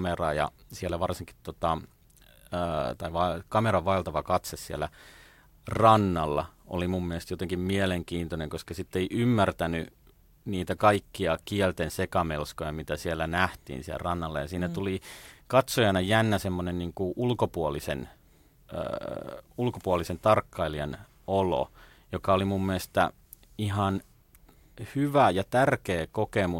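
A speech recording, and no technical fault can be heard in it. There is nothing here that needs a time or a cause.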